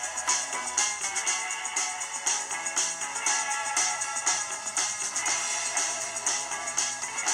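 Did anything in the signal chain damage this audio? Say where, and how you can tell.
Yes. A steady chirping warble sits behind the sound for the whole clip, alternating between tones around 1 kHz and 2 kHz, roughly 25 dB below it. This is timecode bleed in the analogue wiring: 25-frame linear timecode leaking from a neighbouring cable or track.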